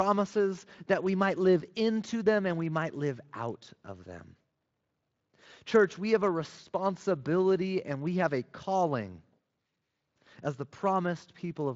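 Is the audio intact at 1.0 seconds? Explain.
Yes, the audio is intact at 1.0 seconds, with no fault to be heard at that moment.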